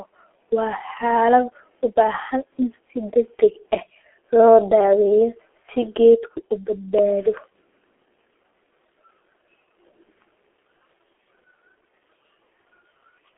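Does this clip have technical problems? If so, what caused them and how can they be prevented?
Yes. G.723.1 codec damage runs throughout the speech: the band is squeezed to a telephone line, nothing above 3.8 kHz, so it sounds muffled and hoarse with smeared consonants, which fits a heavy low-rate coding near 6.3 kbit/s. Prevent it by recording or transmitting through a wideband codec at a higher bitrate.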